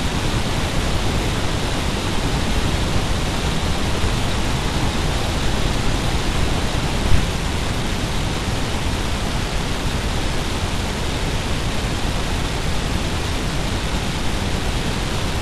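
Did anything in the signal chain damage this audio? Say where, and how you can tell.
Yes. Throughout the clip the speech sits an octave low, doubled and choppy, with a flutter at about 21.5 Hz: interleaved audio read as planar, at the driver or buffer stage. Each block of about 46.4 ms, which fits a 2048-sample buffer, is split so that its first half plays as left and its second as right, both stretched to half speed. That explains why the pace holds while the pitch drops. A plain sample-rate mismatch would slow the timing too.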